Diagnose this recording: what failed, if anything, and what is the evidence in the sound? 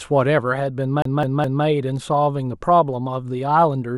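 Playback from optical media failed with the CD stuck on one turn. From 1.02 to 1.65 s, the same 0.21 s segment of speech plays three times, with a brief mute at each jump. A surface scratch is sending the laser back one track each rotation, producing this even stutter.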